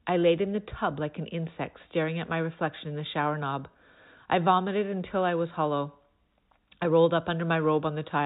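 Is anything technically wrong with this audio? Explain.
No, nothing is technically wrong.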